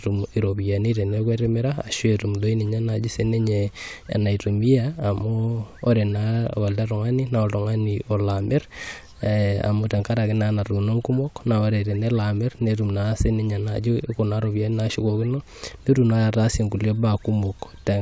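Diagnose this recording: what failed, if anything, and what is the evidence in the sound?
Nothing failed in this recording: the sound shows no evidence of any fault at any stage.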